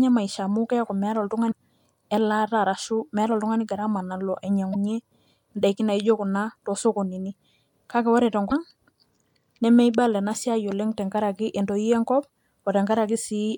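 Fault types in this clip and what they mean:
Damaged data in a compressed stream: three brief glitches break into the speech at 1.48, 4.72 and 8.48 seconds, each lasting only about 40 to 46 ms. At each point part of the compressed data is wrong, so the decoder misreads or discards the frames there, loses its place in the stream, and has to search for the next valid frame header before the speech resumes.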